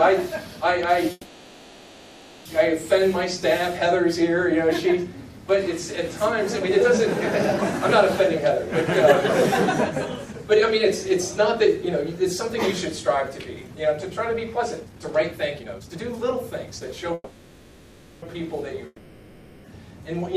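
From 1.11 to 2.47 s there is a call audio freeze: the last sound is stretched into a fading buzz for about 1.34 s, likely because delayed packets left the jitter buffer empty. When the audio resumes, it picks up exactly where it stopped. Nothing is skipped, only delayed, which separates it from a dropout.

A jitter buffer speed-up follows at 10.26 to 11.13 s and again at 11.56 to 12.57 s, running at 104 % and trimming roughly 40 ms each time. A much stronger one at 13.03 to 17.11 s runs at 121 % and cuts about a second. Short pitch-period slices are removed, so the audio hurries while its pitch stays put, unlike a simple resampling speed change.

A second call audio freeze at 17.14 to 18.24 s holds a decaying buzz for about 1.08 s, likely from another late-packet stall, and the audio again continues from where it paused.

The long network dropout at 18.86 to 19.66 s starts the same way, with about 0.78 s of fading fill. 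When the audio returns, though, it has jumped ahead, because about 0.86 s never arrived, likely through network loss. That missing stretch is what distinguishes it from the freezes.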